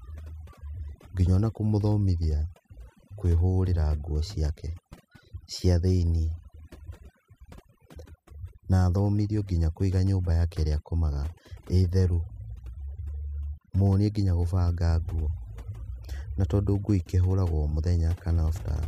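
Overdone noise removal runs throughout the speech. A noise reducer set too strong pulls individual frequency bands down whenever they sit near its noise estimate, taking quieter parts of the voice with them. The background drops and breaks up into twinkling specks.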